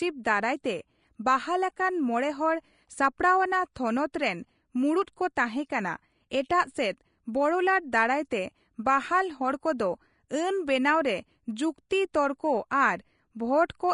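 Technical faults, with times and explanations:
Throughout: Vorbis compression is the likely cause of the hissy, grainy treble in this speech, consistent with a low bitrate of around 34 kbps. Coarse quantisation turns fine high-frequency detail into noise. A spectrogram shows a hard ceiling at 10.6 kHz, with nothing above it, and speckled, noisy texture just below.
6.49 s: pre-echo, a brief hiss spread over about 10 ms just ahead of a sharp onset, which blurs the attack. The codec spread noise meant for the loud attack across the quiet start of its block. The waveform shows low fuzz before the transient, and the spectrogram shows a faint vertical smear leading it.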